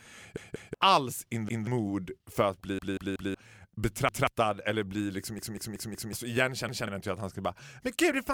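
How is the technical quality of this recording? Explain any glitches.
The recording is marred by six repeated-buffer stutters. Repeated buffer at 0.37–0.74 s, 1.49–1.67 s, 2.79–3.34 s, 4.09–4.27 s, 5.39–6.13 s and 6.69–6.87 s: new audio arrived late, so playback replayed the same roughly 0.19 s chunk, a length that fits an 8192-sample buffer. It repeats once at 1.49, 4.09 and 6.69 s, twice at 0.37 s, three times at 2.79 s and four times at 5.39 s. Each is heard as a choppy stutter with hard joins, and the speech that should have played is skipped, from about a fifth of a second up to nearly three quarters.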